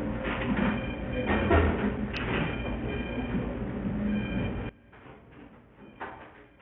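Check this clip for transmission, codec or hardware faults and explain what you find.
Two faults are present: a bandwidth-starved codec throughout, and a polarity problem over the last two seconds.

Bluetooth SBC compression runs for the whole clip. The codec is starved of bits, so it gives its upper sub-bands nothing and quantises the rest coarsely. The result is nothing above 5.2 kHz, dull treble and a gritty, grainy layer on the sound. This fits a very low bitrate of around 48 kbps over a Bluetooth link, which is the likely cause.

From 4.69 s to 6.61 s, one channel inverted is the likely cause of what is heard. Because one side's polarity is flipped, the content shared by both channels cancels when they are combined. The level drops by about 22 dB, leaving only a faint residue of the differing side content.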